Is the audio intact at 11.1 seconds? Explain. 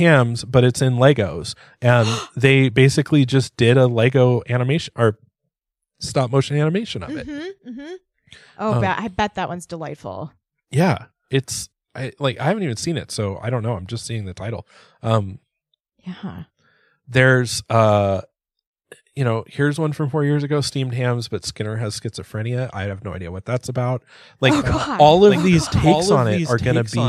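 Yes, the speech at 11.1 seconds is intact, with no fault audible at that moment.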